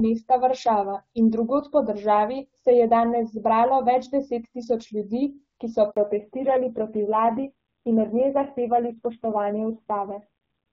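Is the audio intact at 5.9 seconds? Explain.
No. Right after "tisoč ljudi ki so", a handover gap silences the speech from 5.91 to 5.97 s. The call switches networks and no frames arrive for 60 ms, leaving a clean hole rather than a smeared or concealed glitch. From 5.97 s the call has fallen back to narrowband. The wideband HD Voice sound gives way to audio with nothing above 4 kHz, duller and rougher, which fits a low-rate narrowband codec. Unlike a simple low-pass filter, this persists to the end with raspy codec texture.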